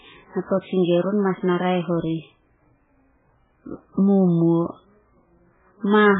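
Throughout, the speech sounds heavily watery and swirly, with nothing above 3.8 kHz. This is likely MP3 compression, pointing to a very low bitrate near 8 kbps.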